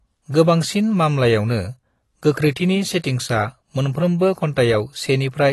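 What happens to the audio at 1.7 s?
At 1.7 s, as throughout the clip, the speech shows AAC compression, likely low-bitrate AAC-LC consistent with around 32 kbps. Coarse quantisation leaves spectral holes and nothing above 12 kHz, so it sounds dull and smeared with a warbling, fizzy edge.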